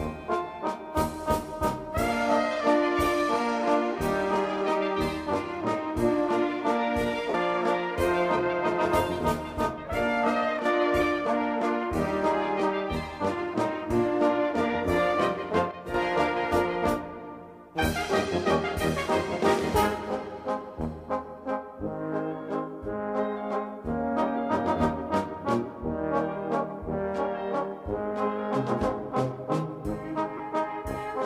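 The audio has two short gaps from lost LE Audio frames. At 7.29 to 7.34 s about 45 ms is missing, which fits six 7.5 ms frames. At 30.37 to 30.40 s a 22.5 ms gap fits three frames. In each, the LC3 decoder fills the hole by repeating the last spectrum with randomised signs, so the sound turns briefly into a noisy smear. Separately, the level drops abruptly by about 6 dB at 10.59 to 10.65 s and again, for longer, at 15.71 to 15.94 s, then recovers. This is likely one channel drops out: with one side gone, the mono sum keeps only half of the shared content, and anything carried only by the lost side vanishes for that span. The light lossy compression in the chain is part of the normal path and is not counted among these faults.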